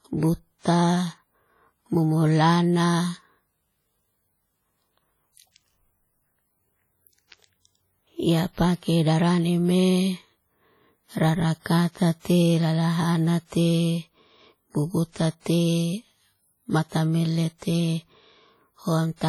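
WMA compression runs through the whole of this speech recording: the audio has a ringing, washy quality with a hiss that breathes along with the signal. This is likely heavy transform coding at a low bitrate, around 32 kbps, where quantisation noise smears across long blocks and weak spectral detail gets discarded. Pre-echo appears at 15.12–15.16 s, 15.40–15.46 s, 16.89–16.92 s and 17.58–17.62 s, where a short hiss arrives 32 to 55 ms before each sharp attack and softens it. The coder spread noise meant for the loud onset across the quiet moment just ahead of it.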